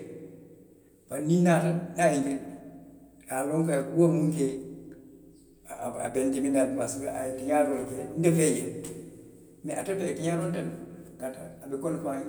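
No technical faults can be heard anywhere in the recording.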